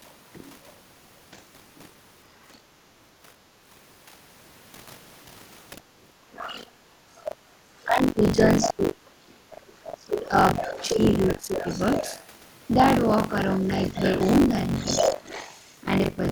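Throughout the clip, buffer tearing puts a steady robotic rattle at about 47 Hz on the speech. It fits a 1024-sample buffer that the writing program and the playback hardware are both crossing mid-period. In each cycle, around a third of the buffer repeats audio from a few tens of milliseconds earlier, with hard joins on both sides. Unlike a codec warble, the buzz holds one fixed rate and is present only while there is signal.

From 0.07 to 0.7 s, and again from 2.45 to 2.58 s, a second, faint voice can be heard under the main one, about 35 dB and about 40 dB down. This is the other side's voice leaking through, most likely loudspeaker sound that the echo canceller failed to remove from the microphone. It differs from crosstalk on a line because it reaches the recording acoustically, through the loudspeaker and microphone.

At 3.5 to 3.62 s the background is gated by the echo canceller. 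The room sound dips by about 8 dB, then recovers. From 5.77 to 6.97 s it happens again, with dips of up to about 12 dB adding up to under half a second. The room sound ducks while the loudspeaker plays, which separates this from a plain noise gate closing on silence.

From 6.32 to 15.74 s the leaked voice returns much louder, only about 10 dB below the speech. While both voices overlap, the talker's speech is likely suppressed in double talk. Between 6.89 and 11.67 s it drops in pieces, at worst by about 30 dB, for roughly two seconds in total. At 14.88 to 15.25 s it dips again, by about 15 dB. The cuts follow the other voice's activity, not pauses in the talker's own speech, and that distinguishes them from packet loss.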